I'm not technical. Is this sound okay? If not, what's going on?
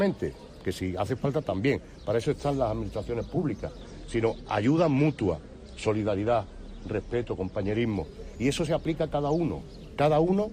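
No. From 3.82 to 7.82 s there's an adaptive stream at a lower bitrate. The connection slowed, so a thinner version played, losing crisp treble, then snapping back.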